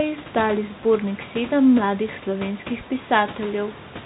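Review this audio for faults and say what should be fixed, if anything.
No faults; nothing needs fixing.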